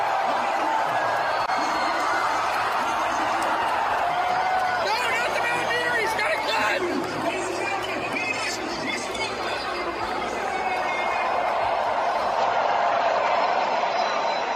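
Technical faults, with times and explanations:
12.38–14.55 s, input switched to a poorer device: the sound abruptly narrows, with nothing above 7.6 kHz and faint new background noise. The likely cause is a change of microphone.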